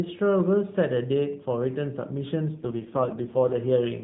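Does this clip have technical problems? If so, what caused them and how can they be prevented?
Yes. An AMR rate drop runs from 2.56 to 3.55 s. The speech turns rougher and more synthetic, with no gap and no change in bandwidth, which fits a fall from 12.2 to 4.75 kbps on a weak radio link. A stronger signal or better coverage prevents it.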